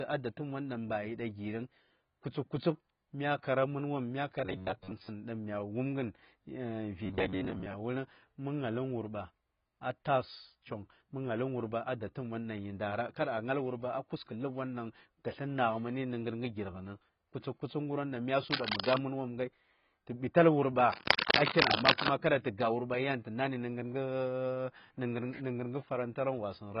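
The whole speech clip sounds dull and smeared, with a fizzy, warbling edge on sibilants. This is heavy AAC compression damage. It is likely AAC-LC at a very low rate, around 16 kbps. The coder drops high frequencies and leaves holes in the spectrum.

From 4.46 to 5.08 s, and again from 7.06 to 7.73 s, the speech turns into a rigid metallic buzz. This is robotic sound from repeated short buffers. Audio likely arrived too seldom, so short chunks were replayed. About half the sound is repeats. The buzz sits at 93.8 Hz, which fits buffers of about 10.7 ms.

From 18.51 to 18.98 s, a burst of scratching and rustling covers the speech at about the same level. From 20.92 to 22.10 s it returns, slightly louder than the speech. This is cable scratch noise. A worn cable or connector was likely moved, and its contact kept changing.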